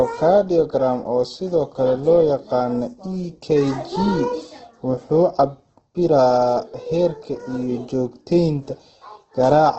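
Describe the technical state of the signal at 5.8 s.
Opus compression damage is present at 5.8 s, as it is through the whole clip. Nothing above about 8.2 kHz survives, and the remaining band sounds rough and grainy, with tonal parts of the speech turned noisy. The likely cause is Opus coding in its CELT music mode at a very low rate, which fits roughly 12 kbps. Short of bits, the encoder keeps each band's energy but fills the detail with folded or noise content.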